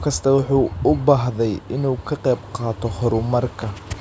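Nothing technically wrong turns up in this short bit of speech; it's a fault-free recording as far as the ear can tell.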